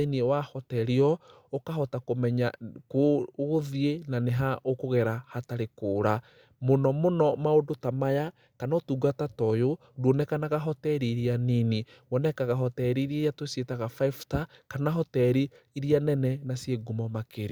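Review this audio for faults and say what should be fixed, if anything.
No faults can be heard anywhere in this speech recording. There is nothing that needs to be fixed.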